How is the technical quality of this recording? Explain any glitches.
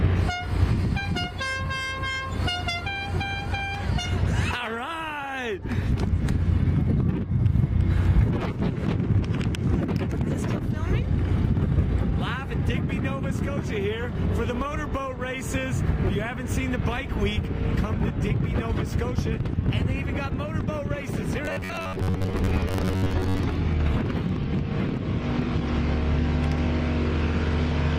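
The recording has one glitch, robotic sound from repeated short buffers, between 21.45 and 23.45 s. The audio becomes a rigid metallic buzz near 94 Hz, likely from roughly half the audio being replaced by repeated 10.7 ms buffers. A spectrogram shows evenly spaced harmonic stripes, and the waveform shows identical repeating cycles.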